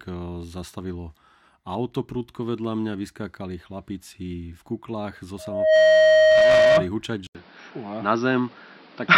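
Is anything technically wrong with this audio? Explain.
Yes. Two faults are audible in this speech clip.

From 5.38 to 6.89 s there is loudspeaker feedback squeal. A microphone is picking up a loudspeaker that it feeds. At 627 Hz the loop's gain goes above one, so that frequency reinforces itself on every pass. A steady tone rises out of the speech in under half a second. It then holds at about 10 dB above the speech level until it stops at 6.89 s.

At 7.27 s the sound cuts out for 80 ms. It returns changed and stays that way to the end. Nothing remains above 5.7 kHz, so the speech sounds duller and narrower. The level shifts by a few decibels. A new background noise sits roughly 30 dB below the speech. This is likely an input switched to a poorer device, such as a second microphone or a headset's call mode with a narrower band.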